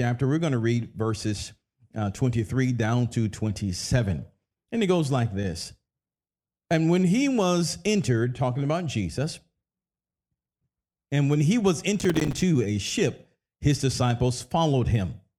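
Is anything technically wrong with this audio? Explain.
Yes. From 11.99 to 12.42 s, just after "and when he was", there is processor overload crackle. The processor fell behind and missed a run of buffer deadlines, each leaving a short hole of silence. The spacing of the dropouts fits buffers of about 5 ms, with something like twenty of them missed. These hard-edged gaps chop the speech into a gritty, tearing crackle for almost half a second, which ends as soon as the load eases.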